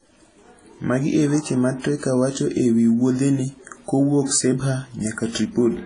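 Throughout the speech, heavy WMA compression is the likely cause of a ringing, washy quality with hiss that swells and fades with the voice. The spectrogram shows a hard ceiling near 10.1 kHz and smeared, patchy energy, which fits a bitrate around 24 kbps.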